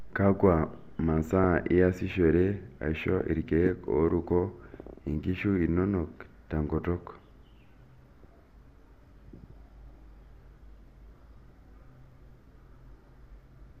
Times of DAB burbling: 1.44, 3.18-3.32, 4.88, 6.78, 9.90-9.99, 12.00-12.12

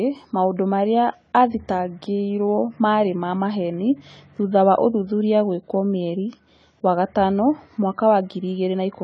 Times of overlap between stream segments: none

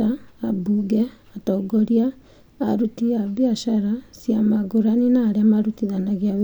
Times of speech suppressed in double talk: none

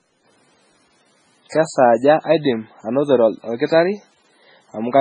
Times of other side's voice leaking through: none

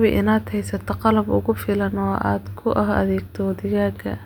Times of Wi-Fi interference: none

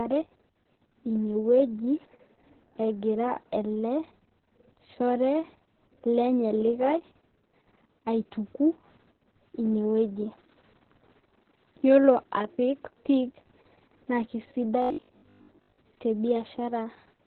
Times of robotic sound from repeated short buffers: 14.82-15.78

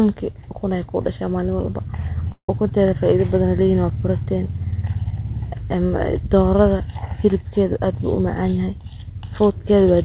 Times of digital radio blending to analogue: none

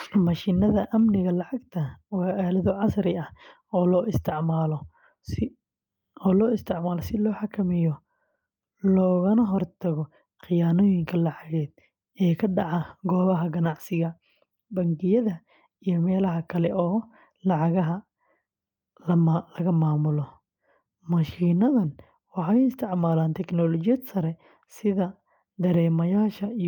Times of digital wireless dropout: none

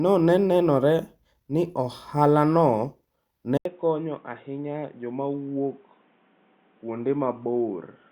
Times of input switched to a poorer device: 3.57-8.12

